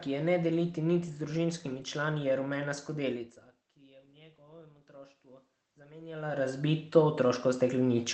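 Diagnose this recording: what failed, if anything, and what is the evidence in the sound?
Automatic gain rising from 3.8 s to the end: in the call processing stage, the input level dropped by about 24 dB, and the gain control responded by raising its gain gradually. The speech and the room noise swell together over the next few seconds.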